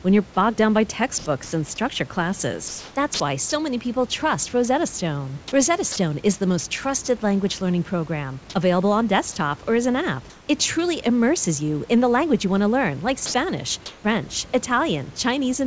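From 1.18 to 1.52 s the room's own hiss gives way to comfort noise in place of the background. This is likely discontinuous transmission, with the sender going quiet and the receiver filling the gap with synthetic noise. It lasts about 160 ms and sounds smooth and featureless. A spectrogram shows an even, textureless wash where the background's irregular detail was.

Inside that stretch, from 1.44 to 1.52 s, the sound is dropped by the voice detector. The sender likely judged a quiet tail to be background, so 80 ms of sound becomes steady noise. On the waveform the envelope collapses abruptly to a flat, low band.

From 2.68 to 3.52 s the voice detector chops the sound. The detector likely toggled repeatedly, and about 360 ms in total is swapped for fill. Syllable edges stutter and the background flickers between real and synthetic. A spectrogram shows speech energy broken by several flat, uniform patches.

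Shorter drops recur at 5.92–5.96 s (40 ms), 7.06–7.08 s (20 ms) and 13.26–13.34 s (about 30 ms of sound lost within 80 ms). Each is likely the detector clipping a word edge. Each one is a brief gap filled with flat noise, seen as a sharp notch in the waveform envelope.

Comfort noise again replaces the background at 10.30–10.48 s and 13.86–14.04 s, each about 180 ms, with the background about 27 dB below the loud parts. These are likely further silence periods. The first fill sits about 2 dB quieter and the second about 5 dB louder, so the floor visibly steps down and then up on a level plot.

Throughout, the call path passes nothing above 8 kHz, a flat ceiling on the spectrogram that fits a wideband codec such as G.722. The genuine room noise sits about 26 dB below the speech.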